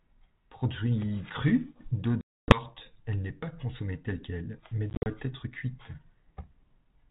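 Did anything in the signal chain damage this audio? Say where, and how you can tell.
Yes. The damage is in the network stage: packet loss on an ADPCM call, carried over a band-limited G.726-style link whose light coding hiss points to 32 kbit/s. From 2.21 to 2.62 s the audio drops to hard-edged silence totalling about 270 ms, which points to roughly thirty lost packets, before "elle n'est pas consommée". Between "consommée telle quelle mais" and "être cuite", 4.90 to 5.07 s, 110 ms is lost in scattered gaps over 160 ms, the longest 50 ms. After each hole, the receiving decoder's adaptive predictor and step size no longer match the sender's, so the sound resumes slightly distorted until it re-converges.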